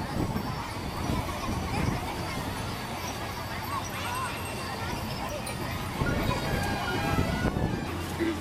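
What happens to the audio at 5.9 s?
At 5.9 s the audio is affected by the wrong sample rate fault that runs through the whole clip. The samples play back 1.38 times faster than they were captured, with no conversion, which fits a 32 kHz recording played at 44.1 kHz. Speed and pitch rise together, so the sound is hurried and about 5.55 semitones sharp. A spectrogram shows every component shifted upward and events squeezed in time, and the waveform's cycles are visibly shorter.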